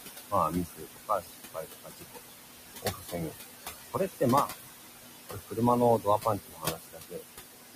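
Throughout the clip, the background rises and falls with the talking: the room noise, which sits about 7 dB below the speech, drops away in the gaps and comes back up underneath the voice. These are noise suppressor artifacts. The suppressor judges, frame by frame, which frequency bands hold only steady noise and pulls them down by about 18 dB. When the speech returns, those bands open again, so the noise floor pumps in step with the talking.

Between 0.3 and 2.45 s, parts of the speech sound swallowed or faint, with the deepest dip about 22 dB and roughly a second of speech affected in total. This is speech cut by the noise suppressor: it mistook quieter speech for background and turned it down with the noise. The same loss recurs from 2.82 to 3.33 s (about 16 dB, roughly 0.4 s affected), from 5.3 to 5.59 s (about 18 dB, roughly 0.2 s), and from 5.99 to 7.24 s (about 21 dB, roughly 0.7 s).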